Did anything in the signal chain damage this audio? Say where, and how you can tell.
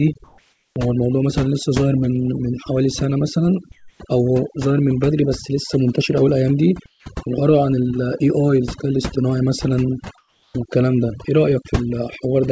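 Yes. Overdone noise removal runs through the whole clip, in the call-processing stage. The background drops and breaks up into twinkling specks. A suppressor set too aggressively is pulling individual frequency bands down whenever they come close to its noise estimate, and the quieter parts of the speech are removed along with the noise. The audio stops at 8 kHz, which fits a G.722 call codec at 64 kbps.

Comfort noise in place of the background appears at 0.24 to 0.76 s, 3.72 to 4.00 s, 6.86 to 7.06 s and 10.18 to 10.54 s, also in call processing. In these pauses the real background, about 36 to 44 dB below the loudest speech, gives way to a steady, featureless hiss that is about 4 dB quieter in the first gap and about 8 to 9 dB quieter in the others. This is likely discontinuous transmission: the sender goes silent, and the receiver fills the gap with synthetic noise.

The onset is clipped by the voice detector at 0.73 to 0.76 s, at the end of the first comfort-noise gap. 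The speech returns abruptly, with its soft beginning missing, and about 30 ms of the start is replaced by comfort noise. The sender's speech detector was likely slow to register that sound had resumed, so those first moments were never transmitted.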